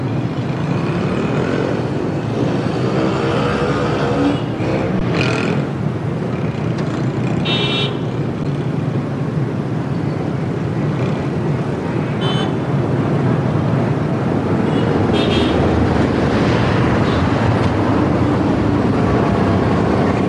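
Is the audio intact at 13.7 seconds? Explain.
Yes, the audio is intact at 13.7 seconds, with no dropout, glitch or other fault at that moment.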